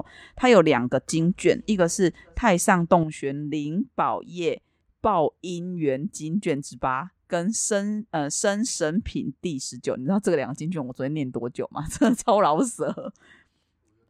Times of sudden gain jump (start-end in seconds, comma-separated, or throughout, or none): 3.03-14.09